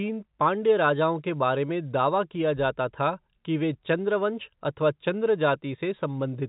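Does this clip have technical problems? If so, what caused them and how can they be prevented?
No, the speech shows no technical fault; it sits in a G.711 telephone-coded channel at 64 kbps, so nothing above roughly 3.8 kHz comes through, as expected for that path.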